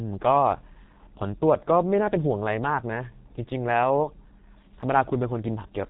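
From start to finish the speech has passed through the G.723.1 codec at a heavy level of damage, with a low data rate that fits the codec's 6.3 kbit/s mode. The codec discards everything above 4 kHz and rebuilds each 30 ms frame from a coarse, slowly updated voice model. The result is muffled, hoarse speech, with consonants smeared together.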